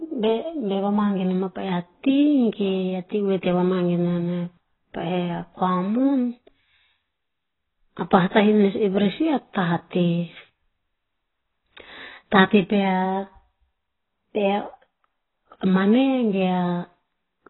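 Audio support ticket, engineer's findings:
Dull, muffled speech for the whole clip, with a warbling, smeared texture on sibilants and sustained sounds. Likely AAC compression at a low bitrate, consistent with about 16 kbps AAC-LC. Spectrogram shows a hard ceiling near 4 kHz.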